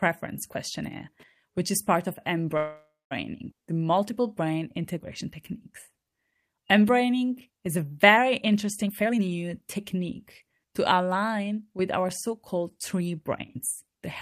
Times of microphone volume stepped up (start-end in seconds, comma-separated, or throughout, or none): none